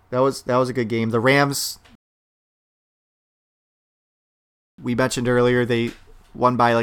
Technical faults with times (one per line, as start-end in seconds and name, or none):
1.95-4.78 rebuffering stall